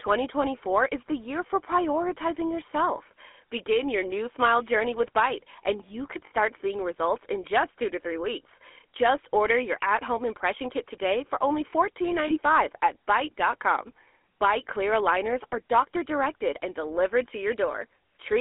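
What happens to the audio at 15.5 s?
A brief rough, metallic ring replaces the sound from 15.50 to 15.54 s. These are lost GSM frames, concealed by repeating the last good frame's settings. The gap fits one 20 ms frame.

Throughout, the GSM full-rate codec gives the speech a buzzy, gravelly roughness by driving a vocal-tract model with sparse pulses, within a 300 Hz to 3.4 kHz band.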